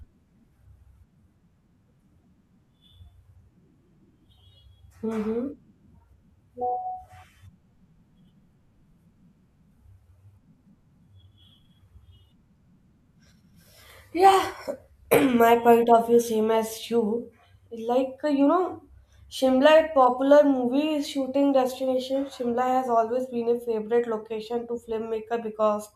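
Nothing here stands out as a technical fault; the speech just runs along the whole way without anything going wrong.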